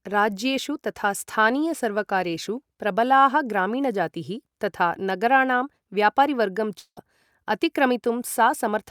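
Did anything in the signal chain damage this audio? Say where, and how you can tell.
Yes. The damage is at the network stage: the symptoms point to a long network dropout at 6.79 to 6.99 s, just after "ग्रामीणजातीः तथा नगराणां व्यापारीवर्गं". There the speech stops and the last sound carries on as a fading buzz for about 0.17 s, then drops to silence for about 70 ms before speech resumes. About 180 ms of speech is simply absent. This is likely packet loss: the receiver's concealment extended the last received sound, ran out, and playback picked up later, skipping the lost stretch.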